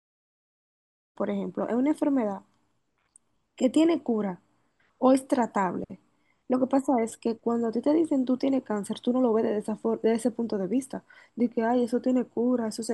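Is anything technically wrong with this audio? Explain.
No, no technical faults found.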